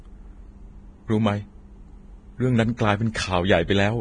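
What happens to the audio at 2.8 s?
At 2.77 s, a brief pre-echo appears. A hiss leads into a sharp attack and smears its onset. The codec spreads quantisation noise across a whole block. The noise sized for the loud attack leaks into the quiet moment just before it.

That block-based noise sits on the speech throughout. The treble sounds hissy and grainy, with nothing above 9.7 kHz. Tones are roughened and onsets blurred. The likely cause is heavy Vorbis compression, and the damage points to a low bitrate of around 23 kbps.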